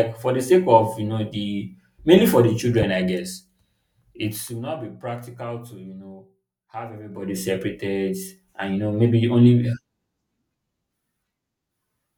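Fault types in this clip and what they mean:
Loud pop: A single sharp pop lands at 2.82 to 2.85 s, between "the mainly for the" and "I guess", peaking roughly 10 dB above the speech, which carries on underneath. A brief voltage pulse entering the signal chain, likely from a plug, switch, static discharge or driver glitch, would produce this kind of abrupt transient. The electronics downstream shape the pulse into the short, hard pop that sits on top of the speech.
Zipper noise: Two level moves are applied in 1 dB steps with no smoothing between them, at roughly 50 steps per second. Each step puts a small click into the waveform, so the clicks run together as a ticking, zipping texture while the level changes. From 4.26 to 4.68 s, just before "be practical to you", the level drops by about 15 dB. From 7.04 to 7.4 s, right after "to you know have", it climbs back by about the same amount.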